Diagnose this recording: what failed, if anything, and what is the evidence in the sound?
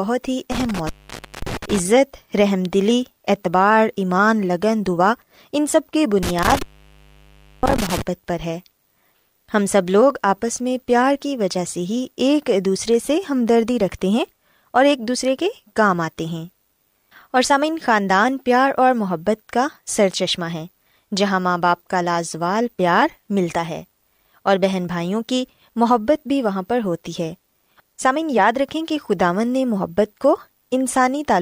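The failure is in the analogue wiring, an intermittent contact, probably a loose plug or cable. The speech drops out twice, between 0.52 and 1.79 s with the line open for about 0.53 s, and between 6.23 and 8.02 s with a longer gap of about 1.0 s. Each dropout has crackle at the edges where the contact scrapes open and shut, and faint hiss fills the gap until the connection closes again.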